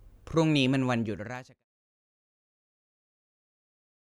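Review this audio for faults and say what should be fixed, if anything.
Nothing here needs fixing; the speech eases out in a smooth fade that starts around half a second in and is gone by 1.65 s, the kind of tidy edit you'd expect, with no click or hard edge at the end of it.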